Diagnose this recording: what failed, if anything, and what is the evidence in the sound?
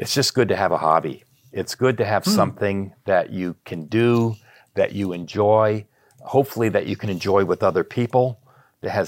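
Nothing failed; no fault is audible in this speech.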